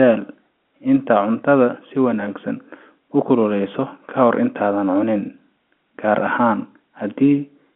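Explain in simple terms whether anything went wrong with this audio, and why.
Nothing went wrong; it sounds like an ordinary phone line.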